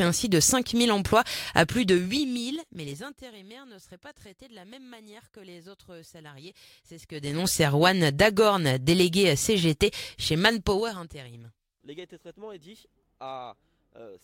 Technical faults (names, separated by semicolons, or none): zipper noise